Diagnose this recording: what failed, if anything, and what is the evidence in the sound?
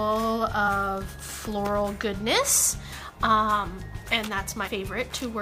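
Brief smeared blips with the sound jumping ahead occur at 0.67 s (about 50 ms lost) and at 2.92 s and 4.67 s (about 100 ms each). These are compressed frames skipped at the codec stage. Whole frames were missing or rejected, and the skip sizes fit multiples of a 26.1 ms frame.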